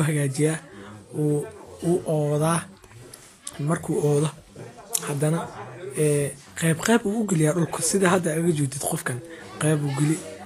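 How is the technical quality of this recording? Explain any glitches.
The quality's held back by one fault that runs the whole way through. Across the speech there's a hissy, grainy texture and nothing above 14.2 kHz, most likely Vorbis compression at a low rate, roughly 35 kbps. The encoder cuts off the top and quantises the remaining treble so coarsely that fine detail turns into noise, so the upper range sounds rough and consonant attacks come out blurred.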